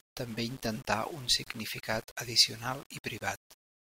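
From start to finish, the speech has most likely been reduced to a very low bit depth, around 7 bits, and rounded without dither. Because no dither breaks up the rounding error, that error tracks the waveform, leaving a grainy distortion roughly 20 dB below the signal that shifts with every syllable. Quiet passages and decaying word endings turn gritty.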